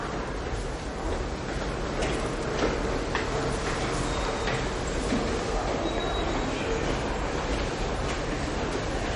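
MP3 compression runs throughout the clip. The audio has a hard treble ceiling near 10.6 kHz, plainly watery, swirling texture, and smeared attacks, likely from a low-bitrate MP3 encode around 37 kbps that dropped weak frequency lines frame by frame once bits ran short.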